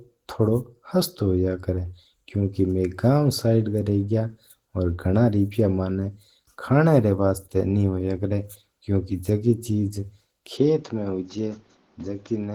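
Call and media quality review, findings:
Opus voice compression throughout. Speech hoarse, slightly robotic, plainly audible. Encoder running hybrid mode at about 16 kbps, 20 ms frames: SILK codes the low band, a thin CELT layer carries the top. Too few bits, so the excitation is quantised coarsely.

Input switched to a poorer device, 10.57 s to end of clip. No gap at the switch. Sound turns duller: level drops about 5 dB, new noise floor roughly 35 dB under the speech. Likely cause: capture moved to a narrower-band microphone or headset profile.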